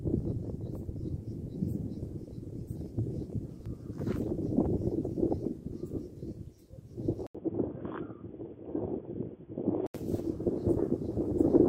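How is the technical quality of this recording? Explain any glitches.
The recording has one clear glitch. From 7.27 to 9.95 s, after a brief 80 ms dropout, the sound turns dull and boxy, with nothing above 3.4 kHz, faint new background noise, and unchanged loudness. The likely cause is an input switched to a poorer, narrower-band device mid-recording.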